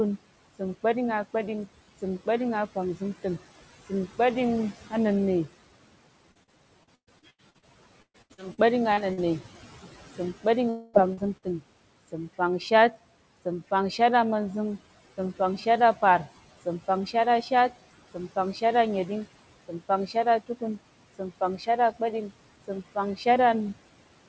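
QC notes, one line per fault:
Throughout: noise suppressor artifacts. The suppressor pulls down bands it judges to be steady noise, by about 17 dB, deciding afresh every frame, so the background drops away in pauses and swells back under speech. On a spectrogram the noise floor appears as patchy, flickering blotches that come and go with each syllable rather than a smooth even haze.
6.32 to 7.65 s and 8.02 to 9.20 s: repeated packet loss (robotic sound). Holes arrive one after another, 8 in the first stretch and 6 in the second, each up to about 118 ms, and roughly a third of each span is synthesized by stretching the last sound. Speech turns choppy, with pieces missing. A spectrogram shows repeated smeared, oddly regular harmonic blocks interrupting normal speech texture, and the waveform looks stuttered.
10.69 to 10.96 s: long network dropout. About 240 ms of audio never arrived, and the gap is filled completely by continuing the last sound rather than left silent, likely a loss in the network path. 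It is heard as a held buzz or hiss that fades before speech resumes later on. On a spectrogram this is a flat, sustained band fading out, and the waveform shows a smooth, decaying envelope.
11.13 s to 11.20 s: short concealed packet loss. A 40 ms piece went missing and was patched from the preceding sound, then blended back into real audio. It comes across as a brief smear or wobble, possibly swallowing a consonant. A spectrogram shows a narrow vertical strip where the fine detail blurs and the harmonics hold unnaturally still, and the waveform shows a tiny repeated-looking segment.
11.37 to 11.45 s: burst of packet loss. About 40 ms of audio was lost, covered by roughly 50 ms of continuation that is turned down as it goes, so a voiced sound becomes a short held buzz and unvoiced sound a fading hiss. Speech then resumes slightly further on with that part gone. On a spectrogram there is a short frozen, dimming patch, and the waveform shows a tapering envelope before normal speech returns.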